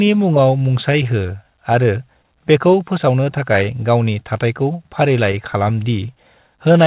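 Clock drift between sender and receiver runs through the whole recording: the sending side's clock runs roughly 5 percent slow relative to the receiver's. Because fresh audio arrives slightly too slowly, the receiver's jitter buffer keeps draining toward empty, so playback never settles into a steady pace. The speech carries a faint, persistent unevenness of tempo rather than any single obvious break. The band-limited sound of the narrowband call path, with nothing above 4 kHz, sits underneath all of it.

Repeated timing corrections, from 0.05 s to 6.68 s, are how the receiver copes with that drift. It keeps stretching short pieces of audio, leaving playback at 96 percent speed and adding about 300 ms in total over the span. The stretches all push the same way but land at uneven intervals. They show up as a slightly dragging, wavering delivery and small hiccups rather than clean cuts.

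Scattered short gaps, between 0.34 s and 3.56 s, come from about five late or missing packets. Each hole was patched by extending the preceding sound, filling around 40 ms altogether, with the longest patch near 15 ms. Each one is a brief tick or smear in otherwise continuous speech. A second cluster, from 4.73 s to 5.56 s, has about three such patches covering roughly 20 ms. The longest is around 10 ms, heard as the same brief glitching.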